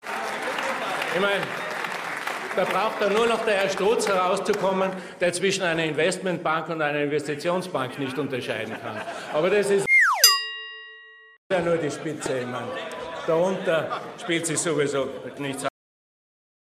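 At 15.69 s the audio has a cut-off end. The sound stops mid-event, with no natural decay. The final buffers were never written or played out. Digital silence follows abruptly and runs for about one second, to the end of the file.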